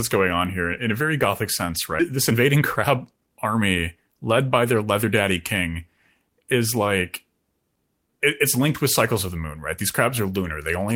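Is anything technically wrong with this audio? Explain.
Yes. At 1.99 s the speech jumps abruptly forward, about a second missing with no gap: a skip ahead, where queued audio was dropped, likely on buffer overflow. From 2.11 to 5.04 s the speech sounds hurried, running at 116% with unchanged pitch: jitter buffer speed-up, trimming pitch periods to remove about half a second of excess delay.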